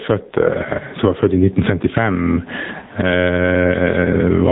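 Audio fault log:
throughout, gain pumping: the gain ducks by around 20 dB under each loud syllable, likely from gain set far too high and a fast limiter.
throughout, AMR narrowband mobile codec: nothing passes above 3.8 kHz, and heavy buzzy, synthetic coding smears the speech, which fits AMR-NB at a low bitrate near 6.7 kbps.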